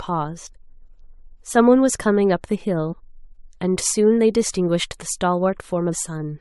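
At 5.91 s, compressed frames were skipped: about a tenth of a second of the speech goes missing, consistent with several roughly 23 ms frames.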